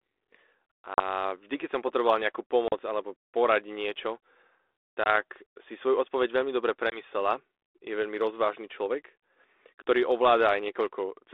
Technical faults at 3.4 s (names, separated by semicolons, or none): none